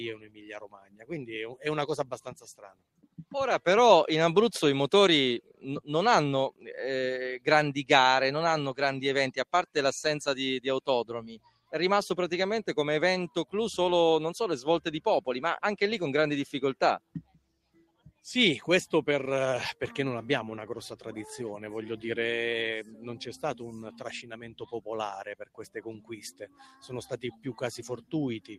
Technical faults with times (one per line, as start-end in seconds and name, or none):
0.00-28.59 noise suppressor applied to music or sounds
0.16-3.34 sound cut by the noise suppressor
5.44-7.47 sound cut by the noise suppressor
9.39-9.76 sound cut by the noise suppressor
11.21-11.72 sound cut by the noise suppressor
16.99-18.24 sound cut by the noise suppressor
22.84-22.99 sound cut by the noise suppressor
23.91-28.59 sound cut by the noise suppressor